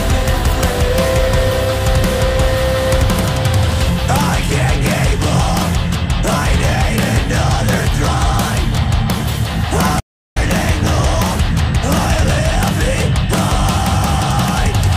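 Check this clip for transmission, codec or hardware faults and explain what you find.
There's one clear fault: an audio dropout to silence from 10.00 to 10.36 s, roughly a third of a second. The sound cuts off mid-flow and then picks straight back up, and the gap is dead digital silence with no room tone or noise floor at all. That silent stretch most likely means the input was lost for a moment, maybe a loose connection, a failed link or a brief mute, while the recorder kept writing empty samples. Whatever was there during that gap is gone.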